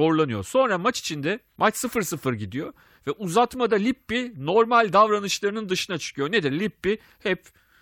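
No technical faults can be heard in this recording.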